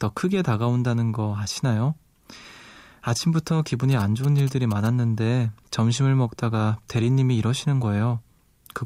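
GSM signalling bursts appear from 3.91 to 4.87 s. A nearby 2G phone is sending short control bursts to its network, and the audio circuitry rectifies them into a galloping dit-dit-dit of brief 217 Hz buzzes about 15 dB below the speech.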